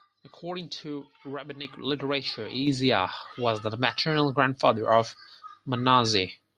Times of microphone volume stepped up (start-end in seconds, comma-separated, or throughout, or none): 1.65, 2.67